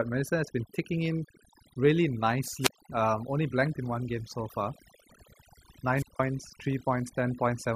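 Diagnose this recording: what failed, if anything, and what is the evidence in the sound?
Overdone noise removal runs through the whole clip, a processing-stage fault: the background sits near silent with twinkling specks because the suppressor pulls individual frequency bands down whenever they approach its noise estimate, taking quiet speech detail with them.

Wireless microphone squelch dropout occurs at 2.59–2.83 s, just after "been ticking in really", and at 5.93–6.20 s, in the analogue radio link. Each time, hiss rises, then the output mutes for about 160 ms and 170 ms respectively as the weakened FM signal trips the receiver's squelch.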